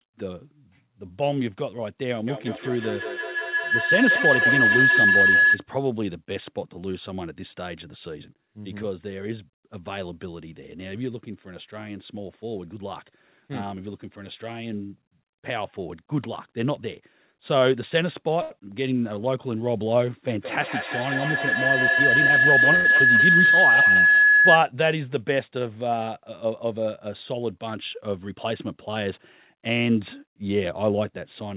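From 2.27 to 5.68 s a feedback howl builds: the loop between a microphone and loudspeaker on the same call keeps gaining, narrowing to a tone around 1.5 kHz, repeating about every 200 ms and peaking about 7 dB above the speech. It grows rather than fading like an echo.

At 18.42 to 18.52 s a short stall from a late packet holds the sound for 82 ms while the jitter buffer waits. Nothing is lost; the speech simply resumes late.

A second feedback howl runs from 20.38 to 24.70 s, again near 1.5 kHz, repeating at about 200 ms and about 7 dB above the speech. Inside it, from 21.89 to 22.54 s, a jitter buffer speed-up plays the audio at 111% speed, trimming about 70 ms so it sounds hurried at unchanged pitch, unlike a pitch-shifted playback. At 22.76 to 22.87 s another stall stretches the sound by 90 ms.

From 28.29 to 29.56 s a milder speed-up runs at 106%, removing roughly a tenth of a second.

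The G.711 mu-law call path limits everything to below 4 kHz.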